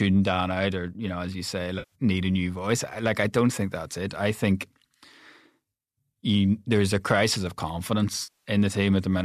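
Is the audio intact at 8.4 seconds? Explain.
No, there's AAC frame loss with concealment from 8.23 to 8.49 s: the decoder patches the missing stretch from the last good spectrum, so it sounds smeared and noisy.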